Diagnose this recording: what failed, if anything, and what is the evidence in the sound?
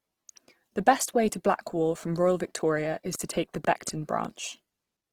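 The codec stage is the likely source of the damage heard across the whole speech recording, which sounds like Opus compression. The voice sounds grainy and rough rather than swirly, and the top end stays present instead of going muffled. That fits Opus running in its music mode at a low rate, roughly 16 kbps, filling starved bands with folded or noise energy. MP3-style damage would leave spectral holes and a watery swirl instead.

A train of clicks runs from about 3.15 s to 4.26 s. There are roughly five similar pulses, about 3.6 per second, unevenly spaced and standing around 5 dB above the speech. Because they repeat in a burst and are not tied to the speech, they likely come from interference on the analogue wiring or from a faulty connection or power supply.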